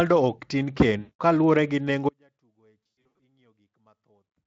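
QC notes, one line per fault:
0.99–1.21 s, VoIP packet loss concealed by the speech codec, right after "ok tin": about 200 ms of audio is missing, consistent with roughly ten lost 20 ms frames. The Speex decoder keeps repeating its last pitch and spectral shape at falling gain, so the sound smears into a buzzy tone or coloured noise that fades. It stays thin briefly after packets resume.
2.09 s to end, audio dropout to a faint residue: the sound cuts off abruptly rather than fading or pausing. Until the end only a faint remnant remains, very roughly 40 dB below normal level. The likely cause is the wanted signal being lost while the path after the break stayed live.
2.95–3.16 s, VoIP packet loss concealed by the speech codec: inside the dropout, about 260 ms of audio goes missing in bursts spread over 360 ms, the longest about 100 ms. The decoder's extrapolated, decaying fill adds a buzzy or noisy smear to the faint residue.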